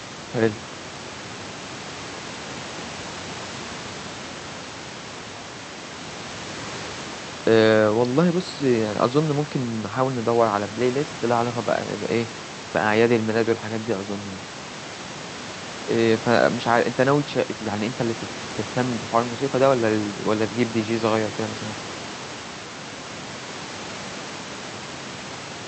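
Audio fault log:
No fault found in the clip.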